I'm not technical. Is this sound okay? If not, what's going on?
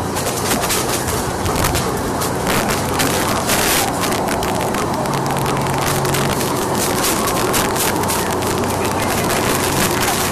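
No. All the way through, the loudest moments break into harsh, violent cracks. This is integer overflow: when the sound got louder than the system could count, the numbers wrapped around to the opposite extreme instead of stopping at the top. Only a small share of the sound goes that high, so the cracks come in bursts on the loud peaks. Ordinary clipping just flattens peaks into a fuzzy buzz; here each peak snaps to the opposite side, which sounds far sharper and more jarring.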